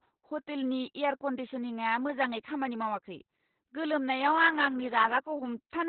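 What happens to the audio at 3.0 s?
At 3.0 s you're hearing the same Opus voice compression that runs through the whole clip, nothing new at that moment. The sound points to the SILK linear-prediction coder working narrowband at a very low rate, around 8 kbps. Everything above roughly 4 kHz is cut off, and the excitation is coded coarsely. So the speech comes across muffled and boxy, with a hoarse, slightly robotic buzz to it. The damage is heavy.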